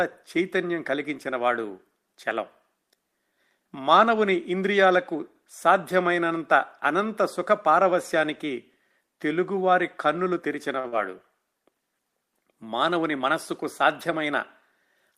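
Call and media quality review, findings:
Short stall from a late packet, 10.79–10.86 s: sound held about 46 ms while the jitter buffer ran dry, then resumes intact; nothing lost, playout delay grows 46 ms.

Short concealed packet loss, 10.88–10.94 s: decoder concealment bridges about 40 ms of audio that never arrived. Unlike the stall, it does not resume where it stopped. A brief smear covers the gap.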